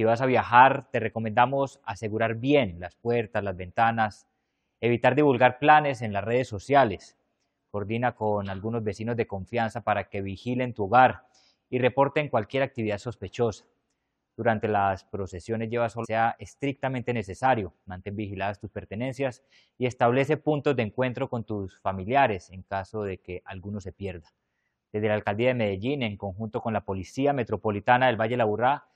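At 16.03 to 16.06 s there is damaged data in the compressed stream: corrupted bytes make the decoder misread the frames there and lose sync until it finds the next valid frame header, producing a brief glitch lasting about 22 ms.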